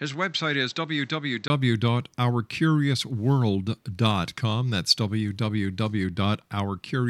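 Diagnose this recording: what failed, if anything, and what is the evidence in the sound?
Input stage: likely an input switched to a poorer device. Until 1.5 s, nothing above 7.9 kHz. Level sits about 5 dB lower. Then 20 ms silence.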